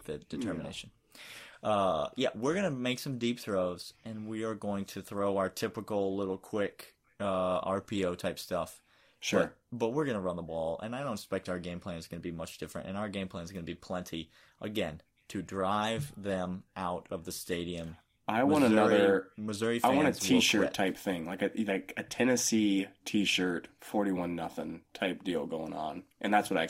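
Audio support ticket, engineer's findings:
Periodic clock jitter, whole clip. Rough, metallic edge on speech, strongest on sibilants and upper harmonics, gone in pauses. Converter clock modulated at around 100 Hz, possibly mains-related interference, putting sidebands at that spacing around every component. Check clock supply and grounding.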